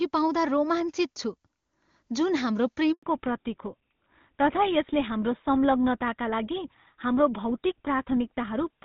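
At 2.93 s, right after "जुन हाम्रो", a handover gap cuts the speech for 100 ms as the call switches networks. The speech fades within a few tens of milliseconds into clean silence, with no clicks or warbling concealment, which is what sets it apart from scattered packet loss.

From 3.03 s to the end, the call falls back to narrowband. The wideband sound before the switch, clear and consistent with AMR-WB near its top rate, gives way to audio with nothing above 4 kHz. The coding turns duller and rougher, which fits GSM full rate. Because it begins exactly at the handover and stays, it points to a codec change rather than a simple equaliser cut.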